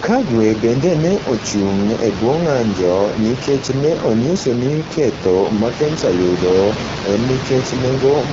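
Speech that sounds rough and raspy from start to finish, with a buzzy edge over the room noise sitting about 10 dB below it. The cause is the AMR wideband (HD Voice) codec running at one of its lowest modes, which fits 8.85 kbit/s, too few bits to model the voice cleanly.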